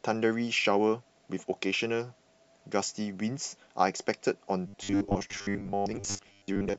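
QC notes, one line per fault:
4.67–6.79 s, robotic sound from repeated short buffers: audio likely arrived too seldom, so a 10 ms slice kept looping over most of this stretch, forcing a rigid metallic 100 Hz buzz onto the speech.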